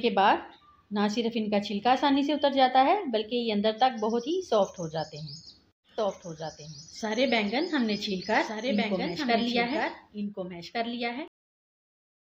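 From 5.98 s to 11.28 s a doubled audio track appears: a dry, full-band copy trails the original by about one and a half seconds, roughly 5 dB quieter, starting and stopping abruptly. It is likely a second, slower capture path. Waveform and spectrogram show every event repeated at that fixed offset.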